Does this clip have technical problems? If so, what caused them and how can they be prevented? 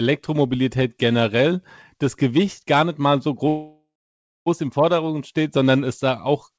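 Yes. There is a call audio freeze from 3.48 to 4.48 s, right after "gar nicht mal so": the last sound is stretched into a fading buzz and then about 0.6 s of silence. It was likely caused by delayed packets draining the jitter buffer. The speech then resumes intact, about 0.98 s later. Preventing it means reducing network congestion or jitter on the call path, or allowing a deeper adaptive jitter buffer.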